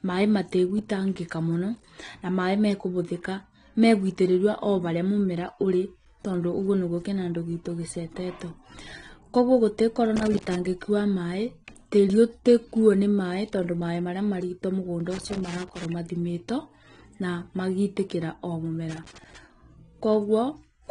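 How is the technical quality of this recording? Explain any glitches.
The recording has clear technical problems. Heavy lossy compression runs through the whole clip, and a contact fault breaks in three times.

The first problem is the AAC compression, and it is likely the cause of the dullness. It lasts the full length of the speech. Nothing is present above about 9.7 kHz. At low bitrates the encoder drops the top band and quantises the remaining frequency lines coarsely against a hearing model. The damage is plainly audible. Speech sounds muffled and smeared, with a swirly, fizzy edge on sibilants. This fits an AAC-LC stream at around 32 kbps.

The second problem is loose connector crackle, in three bursts. The first runs from 10.16 to 10.55 s, ending just before "wa maĩ tĩĩrĩ ũtĩkuuo". The second runs from 15.12 to 15.85 s, right after "marito mũgũnda". The third runs from 18.90 to 19.37 s, after "na magitĩkĩra o". 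A worn or dirty contact makes and breaks quickly as it shifts. This chops the signal on and off. Each burst sounds like irregular crackle or scratching.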